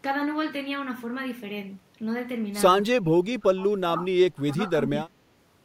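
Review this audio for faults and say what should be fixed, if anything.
Two stretches of the speech sink well below their normal level, from 2.98 to 4.15 s and again from 4.34 to 5.26 s, dropping by something like 25 dB at their deepest and affected for most of each span. That's likely speech suppressed in double talk: the echo canceller couldn't tell this talker from the far end's echo and ducked everything. A better double-talk detector, or gentler suppression during overlap, would keep this talker audible.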